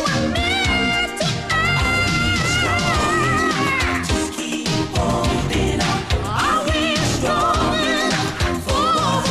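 No technical faults can be heard anywhere in this recording.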